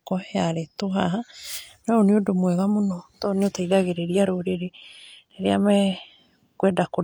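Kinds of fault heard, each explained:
No technical fault can be heard in this speech recording. There is nothing to list for any kind of fault.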